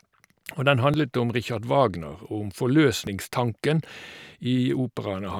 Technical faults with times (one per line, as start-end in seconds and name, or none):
0.94 dropped buffer (overrun)
3.07 dropped buffer (overrun)